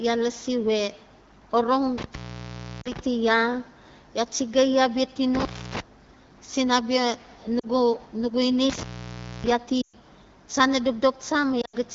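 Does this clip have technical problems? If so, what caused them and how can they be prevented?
Yes, there are two separate kinds of trouble here.

Intermittent contact shows up three times: 1.98 to 2.99 s, 5.35 to 5.80 s, and 8.70 to 9.51 s. A loose plug or cable lets the connection open, so the sound drops out with a crackle on each edge and faint hiss while it's open. The gaps last about 0.69 s, 0.30 s and 0.61 s. To prevent it, reseat or replace the suspect cable and connector, and give it strain relief so it can't wiggle.

Lost AMR speech frames hit at 2.81 to 2.89 s, 7.59 to 7.67 s, 9.81 to 9.95 s, and 11.61 to 11.76 s. Frames got corrupted on the radio link, so the decoder kept repeating its last good settings with the level dropping. The first two are short 40 ms dips. The 120 ms one at 9.81 s drops to near silence within two frames, as wideband does. The last is broken up over about 120 ms, with its longest stretch around 80 ms. 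The speech comes back briefly rough after each. To prevent it, improve the radio link with better signal or a stronger error-protected codec mode. The light wideband coding underneath is audible as ordinary HD Voice character.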